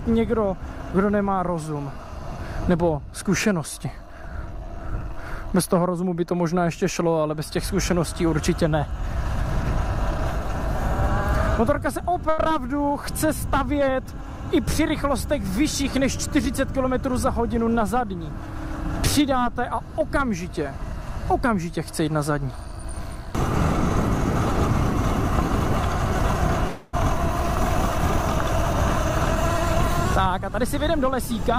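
At 12.29 s a short stall from a late packet holds the sound for 12.29 to 12.40 s. A packet missed its playout time, the jitter buffer emptied, and the receiver stretched the last sound for 86 ms before carrying on from the same point. Nothing is skipped, but playback now runs 86 ms later. It is heard as one sound held slightly too long with a faint buzz or dip. Unlike the later freeze, it is too brief to register as a gap.

A jitter buffer speed-up follows from 14.81 to 15.99 s and again from 16.48 to 17.80 s. With the extra delay sitting in the buffer, the receiver repeatedly cut out tiny pitch-period-sized slices, removing roughly 40 ms and then roughly 50 ms. The sound plays at 103% speed, and the pitch stays put, which separates it from a clock or resampling error where pitch would rise along with tempo.

At 26.67 to 26.95 s a call audio freeze lasts 276 ms. The last sound is drawn out into a decaying buzz or hiss and never reaches silence, then the audio resumes exactly where it stopped. 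The likely cause is packets held up in transit that let the jitter buffer run dry. Because it lasts far longer than the 86 ms stall, it is heard as a distinct hang rather than a single overlong sound.

From 29.85 to 31.57 s a third speed-up, again at 103%, trims roughly 50 ms.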